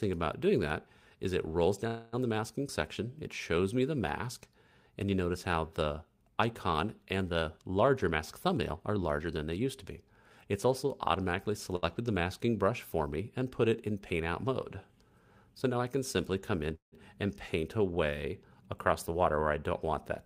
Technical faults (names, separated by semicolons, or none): call audio freeze; jitter buffer speed-up; short stall from a late packet